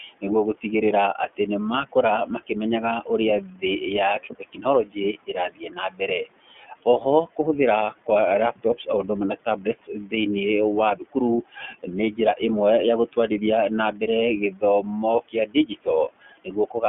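Right from the start the whole clip runs through an iLBC codec, so everything above about 3.4 kHz is gone and there's little below 200 Hz. The codec damage is easy to hear. The speech comes out rough and slightly synthetic, which fits iLBC's 30 ms frame mode at around 13 kbps.

Noise suppressor artifacts sit on top of that for the full length. The suppressor pulls the background down by about 17 dB between phrases, then lets it rise back under the speech.

The suppressor also cuts into the speech itself, mistaking it for noise. This happens at 0.00–1.39 s, 1.92–2.51 s, 3.05–3.63 s, 4.19–7.39 s, 8.06–8.88 s, 9.45–10.12 s, 10.96–12.41 s (just before "ya gũtwarithia na") and 13.93–16.83 s (just after it). Soft consonants and word endings drop by up to about 18 dB and sound swallowed. The longest stretches are around 4–7 s and at the end, adding up to a second or more each.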